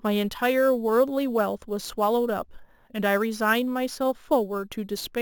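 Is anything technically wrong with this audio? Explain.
Yes. Throughout the speech there is imaging from sample-and-hold upsampling. It fits a 16 kHz original repeated sample by sample up to 44.1 kHz without smoothing. A mirrored copy sits between 8 and 16 kHz, about 21 dB down, and adds a metallic fizz. A spectrogram shows it as a flipped reflection above 8 kHz, and the waveform looks stair-stepped.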